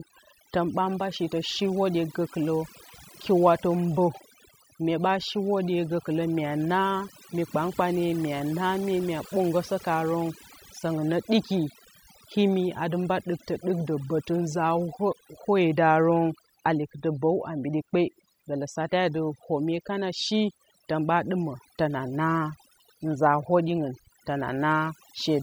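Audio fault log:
Throughout: overdone noise removal. Aggressive reduction gates bands near the noise floor, leaving near-silent gaps with twinkling specks; spectrogram shows patchy, holed time-frequency cells.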